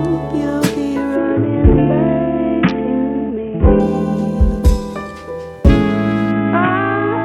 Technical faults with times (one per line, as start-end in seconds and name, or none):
1.16-3.80 Bluetooth SBC bit pool drop
6.31-7.24 Bluetooth SBC bit pool drop